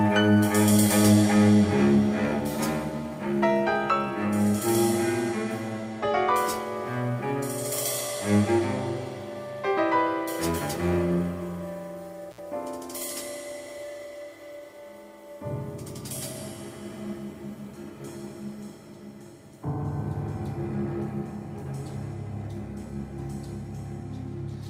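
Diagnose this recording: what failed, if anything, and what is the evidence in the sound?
Intermittent contact at 12.31 to 12.39 s, in the analogue wiring ahead of the converter. For about 62 ms the audio drops out or breaks up, with crackle marking the edges of the gap as the connection opens and closes again. The pattern fits a loose cable or plug momentarily losing its circuit: while the conductor is open the signal path is interrupted, and the ragged make-and-break contact at either end produces the crackle.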